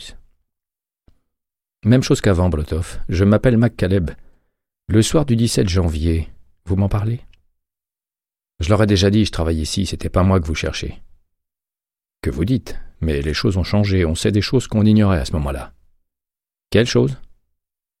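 Nothing is technically wrong with this audio clip.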